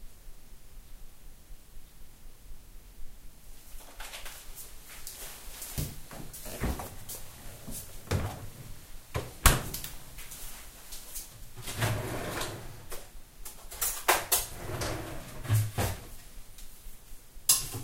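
No dropouts, glitches, distortion or level problems are audible anywhere in these sounds.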